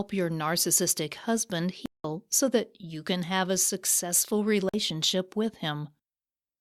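At 1.86 s, right after "your narcissistic husband", the speech drops into a block of digital silence lasting about 0.19 s, ending at 2.04 s. A second, shorter block follows at 4.69 to 4.74 s, after "can have a successful". In each, the output buffer likely went unfilled and was sent as zeros, and the lengths fit 8192- and 2048-sample blocks. Unlike a fade or masked dropout, the sound cuts off and returns abruptly.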